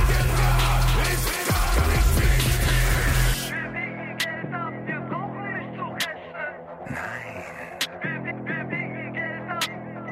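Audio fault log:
0.00–3.34 s, doubled audio track: a full-band copy trails roughly a third of a second behind, a few dB quieter, already present at the start and stopping abruptly at 3.34 s. Unlike echo, it repeats once without decay or room colour, likely from a slower second capture path.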